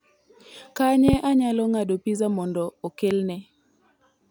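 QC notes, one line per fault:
1.08–1.16 s and 3.11–3.13 s: loud pop. The first is a quick double pop, about 15 dB above the speech. The second is a single pop, about 10 dB above it. Speech continues underneath. A sudden voltage pulse, likely from a switch or static, entered the signal.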